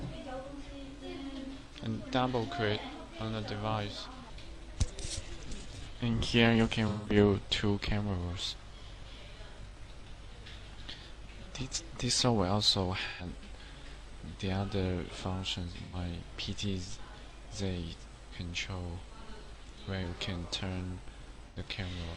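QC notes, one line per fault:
1.67–1.74 s: AAC frame loss with concealment. A 43 ms smeared patch, consistent with one lost frame rebuilt from the previous spectrum.
6.88–7.16 s: AAC frame loss with concealment. The longest gap, 171 ms. The repeated spectrum turns noisy, which fits about four frames.
9.69–9.75 s: AAC frame loss with concealment. A brief 43 ms phasey blur.
13.06–13.26 s: AAC frame loss with concealment. A 128 ms noisy smear.
15.83–15.96 s: AAC frame loss with concealment. An 85 ms smeared patch.
21.47–21.58 s: AAC frame loss with concealment. An 85 ms smeared patch.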